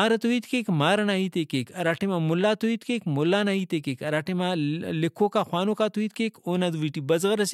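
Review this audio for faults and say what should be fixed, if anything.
Nothing needs fixing; no faults are audible here.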